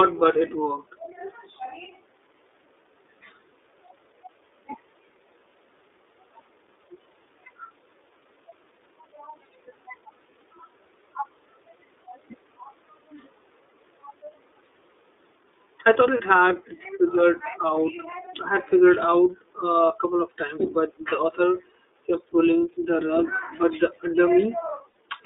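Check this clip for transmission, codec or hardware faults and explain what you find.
Two things turn up here: the whole speech clip runs through the iLBC codec, and there are two short dropouts from lost iLBC frames.

The iLBC codec is present throughout. The band is squeezed to roughly 300 Hz to 3.6 kHz, and coding each frame independently leaves speech clearly rough and slightly synthetic. That fits the 13.33 kbps, 30 ms mode.

Lost iLBC frames occur at 16.17 to 16.20 s and 24.90 to 24.96 s. The decoder loops the last pitch cycle with noise, so each gap sounds like a brief held, buzzy vowel. The first gap lasts about one frame and the second about two.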